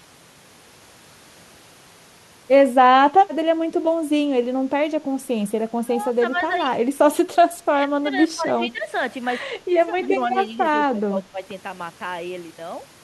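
Between 5.67 and 11.4 s (5.67, 6.64, 7.13, 7.82, 9.54, 10.91 s), speech dips by about 15 to 20 dB, likely speech suppressed in double talk.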